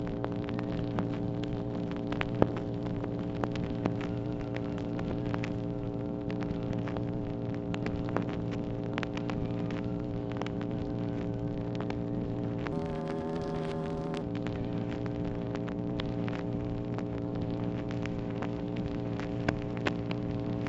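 From 12.72 to 14.22 s the sound abruptly rushes forward and jumps up in pitch, playing about 1.38 times too fast and roughly 5.5 semitones high, before returning to normal. This is a wrong sample rate fault: the samples are read out faster than they were captured, with no conversion, so speed and pitch rise together by the same ratio. That ratio fits material recorded at 16 kHz being played back at 22 kHz.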